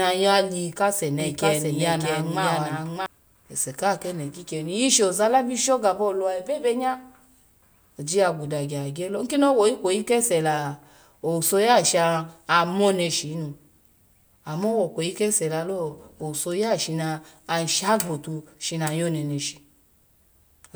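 A second copy of the signal was likely picked up through a slower path, or an edit left two copies out of step, producing a doubled audio track from 1.2 s to 3.06 s. A full-band duplicate of the speech trails the original by roughly seven-tenths of a second, about 5 dB quieter, with no reverberant tail or room colouring. It cuts in and drops out abruptly at those boundaries, so the speech briefly overlaps itself.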